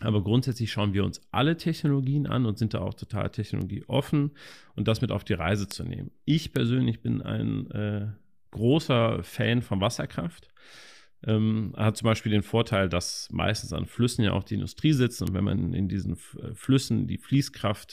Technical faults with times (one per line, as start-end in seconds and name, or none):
0.52 bit error spike
3.61 bit error spike
5.71 bit error spike
6.56 bit error spike
15.27 bit error spike
16.64 bit error spike